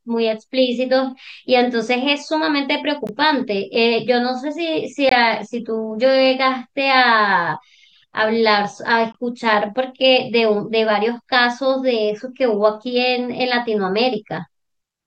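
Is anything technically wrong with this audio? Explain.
Yes. There are gaps between stream segments at 3.07 s, from 5.09 to 5.11 s, and at 9.12 s. The speech arrives in 1-second segments whose time stamps don't quite meet. The player fills each short gap, about 17 to 20 ms, with silence. Each one is a hard-edged hole in the speech. No audio is lost.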